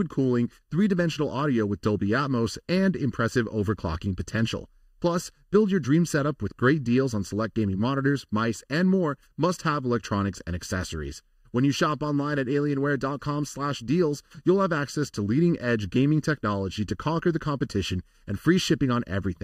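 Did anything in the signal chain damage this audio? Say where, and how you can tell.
Yes. The damage occurs where two channels are summed to mono, with one channel arriving late by roughly 0.7 ms. This is channel delay, heard as comb filtering across the whole speech clip. The speech sounds hollow and phasey from start to finish, with fixed notches that stay put as the voice moves. The first deep notch sits around 700 Hz, with further notches near 2.1 kHz and 3.6 kHz, where the delayed copy cancels the direct one.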